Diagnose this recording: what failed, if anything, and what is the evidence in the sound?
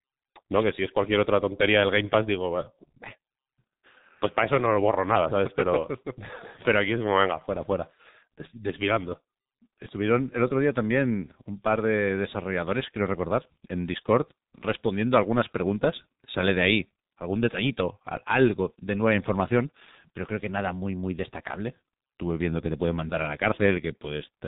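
Codec stage: heavy G.723.1 coding throughout, with muffled, hoarse speech and smeared consonants. A spectrogram shows nothing above 4 kHz and blurred 30 ms frames, which fits about 6.3 kbit/s.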